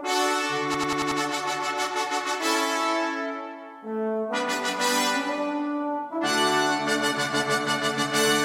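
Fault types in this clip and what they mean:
System hang loop: the system froze while the hardware replayed one buffer. A 93 ms slice repeats five times from 0.74 to 1.21 s, stuttering at 10.8 Hz.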